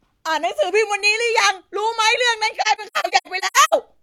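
From 2.61 to 3.74 s there's AAC frame loss with muting: the decoder zeroed the missing frames, so the speech drops into soft-edged holes. About 555 ms is lost in all, scattered across that stretch, the longest gap around a tenth of a second.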